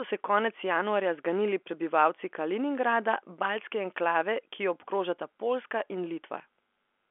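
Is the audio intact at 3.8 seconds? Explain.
Yes, the audio is intact at 3.8 seconds, with no dropout, click or distortion there beyond the narrow telephone band of the G.711 coding, which passes nothing above about 3.7 kHz.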